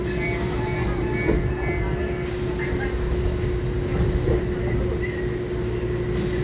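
An everyday-sounds recording with nothing technically wrong with it.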